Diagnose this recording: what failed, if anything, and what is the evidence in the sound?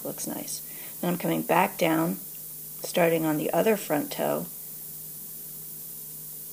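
Low bit depth with noise shaping runs through the whole recording, introduced at sample-format conversion. A steady, thin hiss sits only about 10 dB below the signal and climbs sharply toward the top of the band, which fits a 6-bit word length. With so few levels, each sample's rounding error is large. The shaping filter feeds that error back so the noise is pushed up into high frequencies rather than spread evenly.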